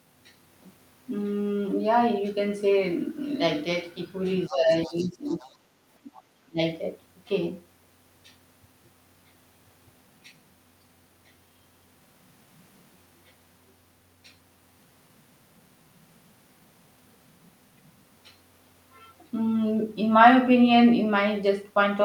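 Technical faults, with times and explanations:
4.47 to 4.55 s, 4.72 to 5.09 s, 5.28 to 5.51 s and 6.14 to 6.22 s: other side's voice leaking through. Faint scraps of a second voice sit well under the main speech, roughly 20 to 30 dB down, likely loudspeaker playback the echo canceller didn't fully remove from the mic.
4.48 to 5.64 s, 5.94 to 6.13 s and 6.44 to 6.60 s: speech suppressed in double talk. The main speech dips sharply while that other voice is present, by roughly 15 dB at first and nearer 25 to 30 dB later, likely because the echo canceller couldn't separate the two and pulled everything down.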